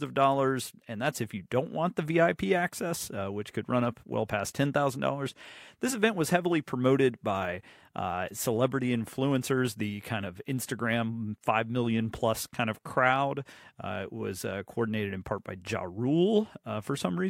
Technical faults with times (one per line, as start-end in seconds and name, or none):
none